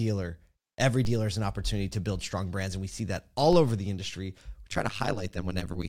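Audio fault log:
1.05 s and 3.53 s, DC steps: the waveform's zero line jumps, giving a low thump each time, then the offset drains away as a roughly 2 Hz high-pass lets it decay.
4.71 s to 5.89 s, overlap-add ripple: frames overlapping without constant gain make the level pump about 60 dB around a hundred times a second, so it sounds like a metallic buzz.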